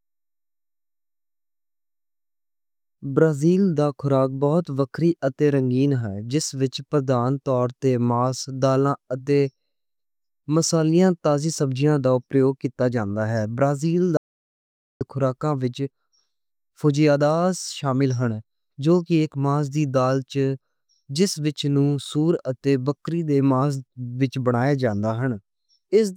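At 14.17 s the speech cuts off abruptly and the track drops to total silence until 15.01 s, when it resumes mid-flow with "خوراکاں وِچ". This is an audio dropout to silence lasting about 0.84 s, with no room tone left in the gap, which points to the input being lost, likely through a disconnected device or broken link, while zeros kept being written. The waveform shows a flat line, and the spectrogram a fully blank band with hard vertical edges.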